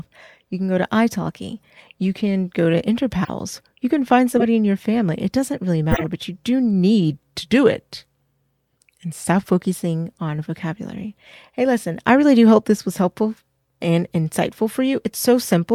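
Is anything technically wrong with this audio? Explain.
Yes. There are two kinds of fault in this speech clip.

Corrupt frame decoded: short bursts at 1.14 s, 3.24 to 3.30 s, 4.33 to 4.43 s and 5.91 to 6.06 s. Bit errors inside the compressed frames were passed to the decoder, which used the damaged gains and codes anyway and put energy at the wrong frequencies. The first two events each span a couple of frames and come out as brief chirps or blips. The later two span several frames and give longer bursts of roughly 100 to 150 ms.

Drift correction step: from 7.14 s to 9.59 s, playback runs 5.84% slow and the pitch falls by 104 cents, about a semitone. The speech sounds lower and dragged, then snaps back to normal speed and pitch. The likely cause is clock-matching software changing the resampling rate in one step to rebalance its buffer, so speed and pitch shift together instead of being corrected gradually.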